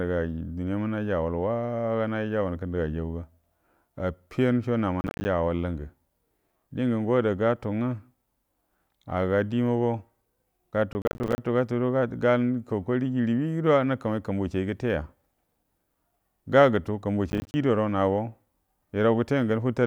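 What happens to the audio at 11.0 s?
At 11.0 s the speech is caught in a burst of processor overload crackle running from 10.93 to 11.38 s. The processor falls behind and misses its deadlines for many small buffers, each around 10 ms, which fits roughly thirty missed in that stretch. Every missed buffer drops to silence with abrupt edges, and the rapid chain of tiny gaps is heard as gritty, tearing crackle over the speech that clears once the load eases.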